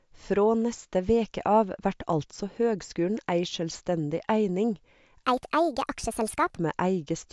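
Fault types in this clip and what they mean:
Wrong sample rate: late in the clip speech turns high and hurried, 1.5 times faster and 7 semitones up, fitting 16 kHz audio played at 24 kHz.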